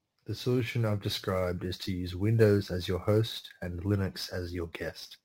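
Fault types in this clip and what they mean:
Sample clock jitter: a fine hiss and grainy roughness rides on the speech for the whole clip, swelling on loud passages and bright, sibilant sounds and dropping away in the pauses. The converter's clock wanders by something like ten microseconds, so each sample is taken a little early or late; where the waveform changes fastest, those timing slips become amplitude errors, here sitting only about 25 dB below the speech itself.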